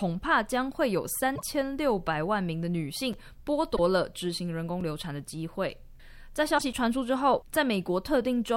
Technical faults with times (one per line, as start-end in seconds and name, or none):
1.32-1.42 damaged data in a compressed stream
3.13 block of digital silence
3.72-3.79 damaged data in a compressed stream
4.81 block of digital silence
6.55-6.62 damaged data in a compressed stream
6.73 block of digital silence